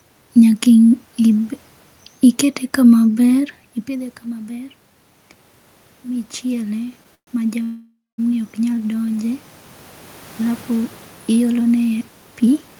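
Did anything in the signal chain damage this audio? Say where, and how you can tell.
Yes, three kinds of damage, all in the call path rather than the analogue side.

Automatic gain rising, in call processing: from 3.31 to 4.81 s the level climbs about 3 dB, and from 6.02 to 9.49 s it climbs about 6 dB. The input had dropped by about 16 dB (the talker moving at around 3.5 s is part of that), and the AGC slowly wound its gain back up. The room noise swells right along with the speech, which tells you it's gain, not the talker coming closer.

Call audio freeze, at the network and jitter buffer: at 7.15 to 7.29 s the sound stalls for 125 ms, trailing off into about 90 ms of silence, and at 7.63 to 8.2 s it stalls for 550 ms, with about 200 ms of silence. The likely cause is delayed packets starving the buffer, with the receiver stretching the last sound until they arrived. Afterwards the audio picks up exactly where it stopped, so nothing is lost. 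It just adds gaps and latency.

Jitter buffer speed-up, same stage: from 12.40 to 12.76 s the speech runs at about 113% speed but keeps its pitch, so it sounds hurried rather than chipmunky. That's the receiver trimming short pitch-period chunks, around 50 ms in total, to work off extra delay held in the buffer.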